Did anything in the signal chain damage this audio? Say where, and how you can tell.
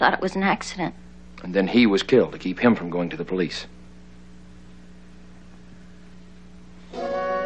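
No, the signal chain caused no damage.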